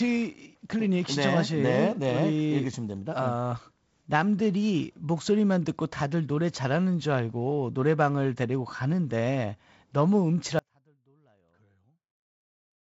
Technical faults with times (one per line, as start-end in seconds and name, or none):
10.59-12.90 audio dropout to a faint residue